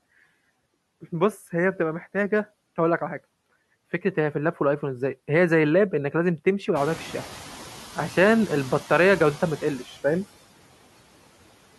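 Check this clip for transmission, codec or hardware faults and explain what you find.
Two faults from noise suppression are audible in the speech. Noise suppressor artifacts run throughout: bands judged steady noise are cut by about 17 dB frame by frame, so the noise sinks between the words and rises under them. Noise suppressor catching up occurs from 6.75 to 7.31 s. When the room noise jumps by about 19 dB around 7 s, the lagging estimate allows only about 4 dB of reduction, and the noise then sinks over 560 ms.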